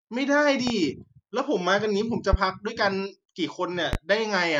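At 0.67 to 0.71 s a loud pop cuts through the speech, about 10 dB above it. Two more follow, each about 15 dB up, at 2.33 to 2.37 s and 3.93 to 3.97 s. Each is a single sharp thump while the speech carries on underneath, most likely from a voltage pulse entering the chain. A waveform would show a tall, brief spike, and a spectrogram a thin vertical stripe reaching across all frequencies.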